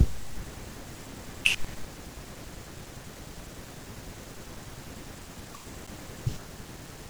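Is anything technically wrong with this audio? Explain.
Yes. At 5.87 s there is a CD skip in this speech. A knock or disc flaw sent the laser to a different turn of the spiral. Playback mutes for only a few milliseconds, heard as a tick, then resumes from a displaced point.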